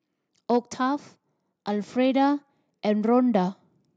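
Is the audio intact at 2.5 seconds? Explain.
No. At 2.5 s the clip is in the middle of an automatic gain rising fault running from 1.66 to 3.58 s. The gain control judged the speech input too quiet and raised its level by about 4 dB, so voice and background swell together steadily.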